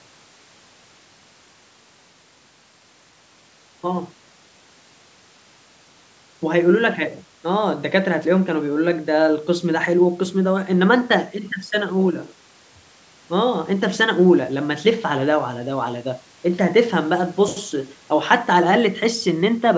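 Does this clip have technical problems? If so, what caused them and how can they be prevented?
No, there's nothing wrong here: the speech has simply gone through a call's usual microphone processing, which trims the deepest bass and leaves nothing above 8 kHz, so there's nothing to fix or prevent.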